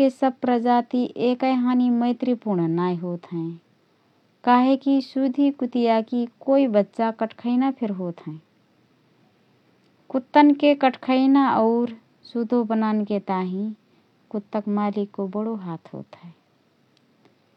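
Nothing goes wrong anywhere in this speech recording, so there are no technical faults to point out.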